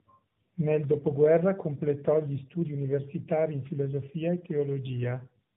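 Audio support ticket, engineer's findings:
Speech rough, muffled and warbly for the full clip; no content above 3.8 kHz. Consistent with tandem speech coding: two AMR-NB encodes in series, with a G.711-type leg between them. Each border decodes and re-encodes, so the second AMR-NB coder models the first one's artefacts as if they were signal. Smearing compounds beyond what either link alone would produce. Warble depth fits a low-rate first AMR-NB leg.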